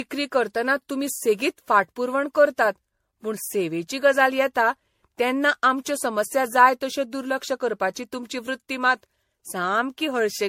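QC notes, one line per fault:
Throughout: generation loss. The speech has that swirly, hollow, smeared quality, with consonant attacks going soft and nothing at all above 16.4 kHz. It sounds worse than a single MP3 pass at this quality would. The likely cause is repeated lossy re-encoding, around seven rounds, in what sounds like a 64 kbit/s MP3 chain. Each pass quantises on a shifted frame grid, so the noise and spectral holes pile up rather than cancel out.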